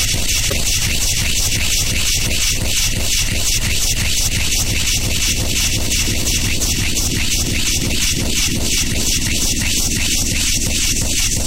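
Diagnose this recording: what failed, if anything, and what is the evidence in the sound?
Storage or codec stage: repeated frames at about 0.49 to 0.53 s, where a 26.1 ms slice plays twice with a small stutter. That fits one compressed frame written again.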